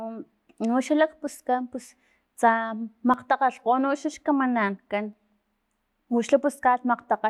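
Speech, and there's a steady ticking running through it from about 1.12 s to 5.13 s, once a second, around five clicks in all. That's periodic USB or driver dropouts. Something in the background is stalling the USB bus or the audio driver on a fixed schedule, and each stall skips roughly a millisecond of audio outright, so the waveform jumps and you hear a tick. They land right on the beat, which gives the timer away.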